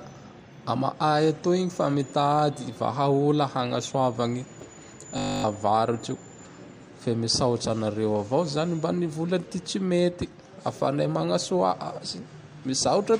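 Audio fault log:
5.18–5.44 s, system hang loop: the playback side stalled while the sound hardware kept reading the same small stretch of its ring buffer, so one 20 ms slice of the speech repeats exactly, 13 times over. Because the loop is so short, the repeats fuse into a steady, flat buzz at 50 Hz rather than a stutter, and roughly a third of a second of the real audio never gets played before normal output resumes.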